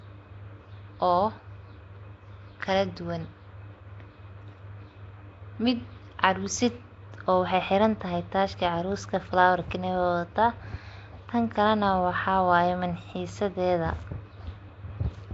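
Throughout the speech there is Nellymoser compression damage: a rough, hissy halo and a smeared, underwater quality, with nothing above 7.7 kHz. This is likely Nellymoser Asao coding, which fits about 32 kbps, starving weak bands of bits and filling them with noise.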